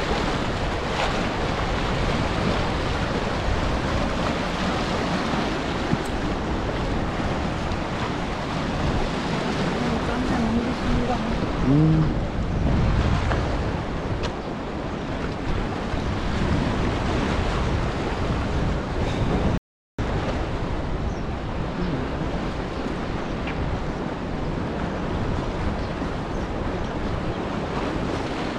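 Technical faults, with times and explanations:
19.58–19.99 s, rebuffering stall: the audio stops dead into silence for about 0.41 s, then carries on from exactly the point where it halted, so nothing is skipped but the clip runs that much longer. The player had used up its downloaded audio and waited for more data before continuing. On a waveform this shows as a flat, empty gap with no fade at either edge; a spectrogram shows a clean blank vertical band.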